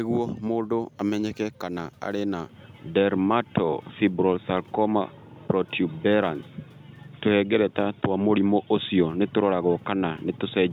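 Input switched to a poorer device at 2.49 s in a speech recording: from there to the end, the sound narrows in band and turns dull and boxy, its level shifts by around 5 dB, and a faint new background noise appears well beneath the speech. There is no silence at the changeover. The likely cause is the system moving its capture to a different, narrower-band microphone or headset call profile partway through.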